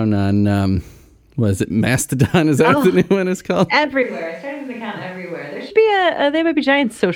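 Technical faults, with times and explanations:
4.03–5.70 s, switch to a distant microphone: right after "new one is called" the sound abruptly turns roomy and hollow, with thinner bass, a drop of roughly 10 dB and background noise rising to around 25 dB below the speech, then snaps back just as suddenly. The likely cause is the close microphone's signal dropping out, leaving a far-off microphone that picks up more reflections and ambience relative to the direct sound.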